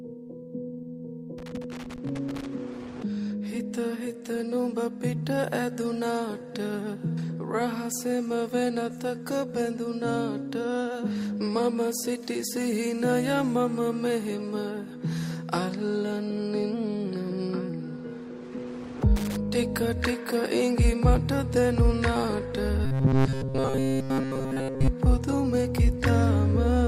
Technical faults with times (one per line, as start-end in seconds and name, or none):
1.38-2.46 loose connector crackle
19.16-19.36 loose connector crackle
22.85-24.88 robotic sound from repeated short buffers